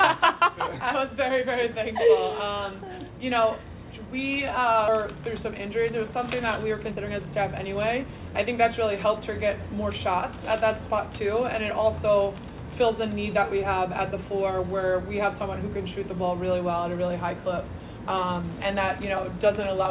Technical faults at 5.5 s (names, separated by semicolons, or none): jitter buffer speed-up